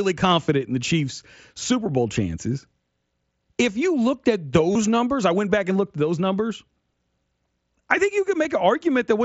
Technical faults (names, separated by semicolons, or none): concealed Bluetooth headset packet loss